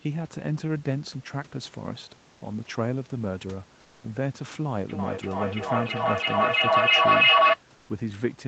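Comfort noise in place of the background at 2.33–2.41 s and 7.75–7.89 s: the pauses turn flat and featureless, about 1 dB quieter, likely from Opus discontinuous transmission synthesising the gap.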